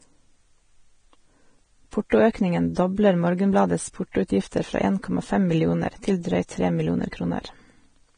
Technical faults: Vorbis compression; pre-echo

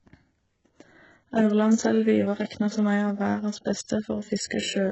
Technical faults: HE-AAC compression

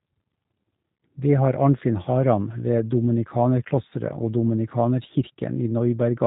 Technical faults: G.729 codec

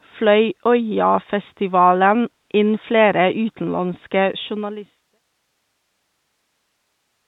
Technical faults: none

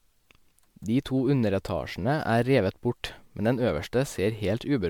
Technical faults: generation loss

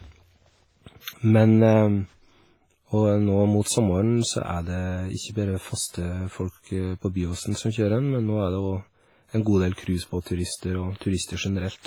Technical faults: WMA compression; pre-echo

